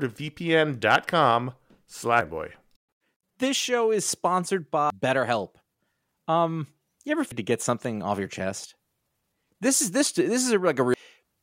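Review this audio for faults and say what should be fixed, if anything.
Damaged data in a compressed stream: bytes in the encoded file were lost or overwritten, so the decoder misread those frames, lost sync and hunted for the next frame header. Each time this produces a brief chirp or blip in the speech, at 0.0, 2.21, 4.90 (just after "show is sponsored"), 7.32 (between "you ever" and "to get something off") and 10.94 s. To fix it, re-encode or re-fetch the file from an intact source and verify it with a checksum before playback.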